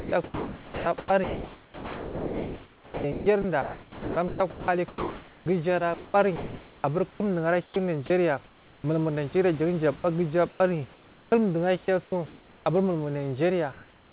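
From the start to 8.84 s the sound is chopped by the voice detector, likely because the sender's detector kept toggling transmission on and off. About 5.6 s of that stretch is replaced with synthetic fill, so quiet syllables and word edges drop out. On a spectrogram, the speech harmonics, already capped at 4 kHz by the G.711 call path, break off into flat, even-textured patches, and the waveform shows abrupt steps where real signal gives way to fill. The same chopping returns from 9.96 to 11.32 s (about 0.56 s replaced) and from 11.86 to 12.66 s (about 0.5 s replaced).

From 13.72 s to the end, comfort noise takes the place of the background, likely because transmission stopped during the pause and the receiver generated noise to fill it. The real background, sitting about 32 dB below the loud passages, is swapped for a featureless hiss about 5 dB quieter. On a spectrogram the detailed, uneven noise floor turns into a uniform smear, and the waveform's envelope drops slightly and stays unnaturally steady.

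At 14.08 s, just before the clip ends, the onset is clipped by the voice detector, likely because it was slow to register that sound had resumed. About 50 ms of the start is lost to comfort noise, so the sound begins abruptly with no soft attack. The waveform jumps straight from low hiss to the sound, and the spectrogram shows energy appearing as a hard vertical edge.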